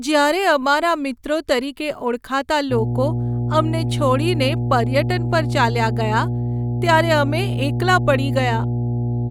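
At 2.7 s a mains hum comes in and stays until the end of the speech clip. It is a steady low tone at 60 Hz. Power-line current has leaked into the signal path, likely through a ground loop or a nearby transformer. The hum sits at roughly the same level as the speech itself. So it competes with the voice rather than lurking underneath it. A few low harmonics add a buzzy edge.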